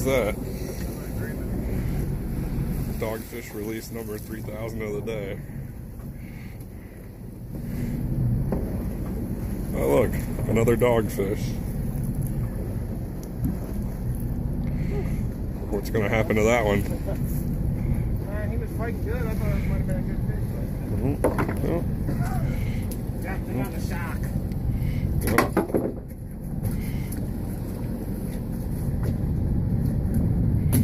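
Nothing is technically wrong with this audio.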